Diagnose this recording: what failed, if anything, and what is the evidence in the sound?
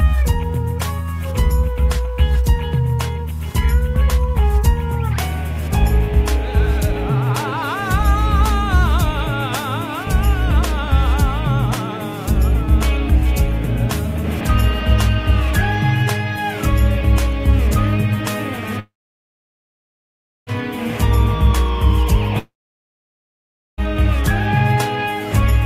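The network stage failed, with two long network dropouts, likely from lost packets. At 18.79 s the sound turns into a short fading buzz or hiss, then silence until 20.50 s. It happens again from 22.39 to 23.81 s. The receiver stretched the last sound, then gave up.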